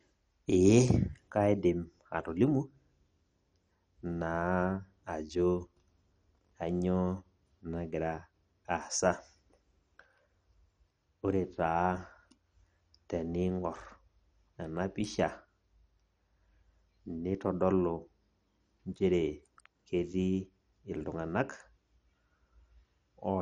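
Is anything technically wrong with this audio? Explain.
Yes. Throughout, the speech was likely starved of bits by MP2 compression, consistent with about 48 kbps. Sub-bands above 11.2 kHz are switched off, leaving the sound dull, gurgling and granular.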